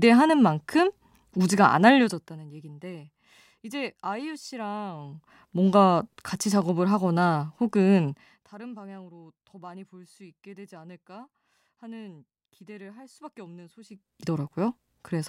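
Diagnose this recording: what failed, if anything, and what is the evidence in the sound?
Zipper noise in the gain stage: ticking at 8.08–8.52 s and 13.86–14.22 s, where the level jumps in unsmoothed 1 dB steps, about fifty a second.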